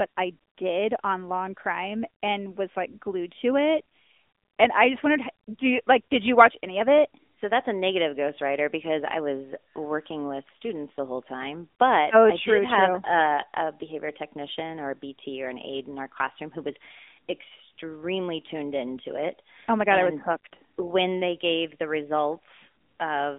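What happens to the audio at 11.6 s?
At 11.6 s the speech is still carrying the AMR narrowband mobile codec damage that runs through the whole clip. Speech is resampled to 8 kHz and rebuilt from a vocal-tract model fed by a few pulses per 5 ms subframe, giving a plainly audible buzzy, synthetic edge that points to a mid-range rate around 10 kbps. The sound is confined to roughly 250 Hz to 3.6 kHz. A spectrogram shows a flat ceiling near 3.7 kHz with nothing above it.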